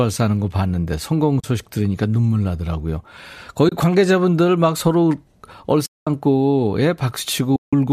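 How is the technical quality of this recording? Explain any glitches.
The recording has four dropouts from AAC frame loss with muting, at 1.40–1.44 s, 3.69–3.72 s, 5.86–6.07 s and 7.56–7.73 s. The decoder replaced the missing frames with silence, and the overlapping windows fade the speech out and back in. The result is soft-edged gaps. Lengths of 40, 30, 210 and 170 ms fit 10 ms frames. The slight graininess throughout is likely from low-delay AAC compression.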